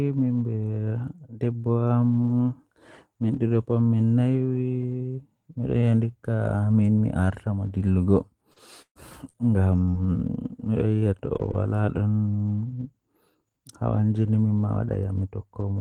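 From 8.01 to 10.20 s the speech breaks up with repeated packet loss (robotic sound): four gaps, the longest 133 ms, are each filled by stretching the preceding sound, giving a choppy texture. Unlike a single dropout, the holes recur in quick succession.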